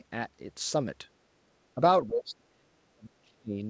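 Speech clip where the talker gets pushed down twice, a slight dip around 1.75 to 1.81 s and a heavy one from 2.07 to 3.6 s, most likely speech suppressed in double talk by the echo canceller.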